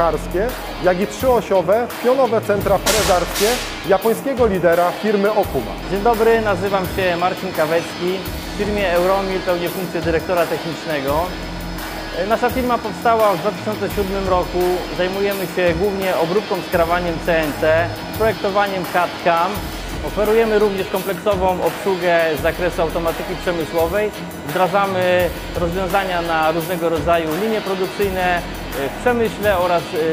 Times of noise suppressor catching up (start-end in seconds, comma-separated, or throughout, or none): none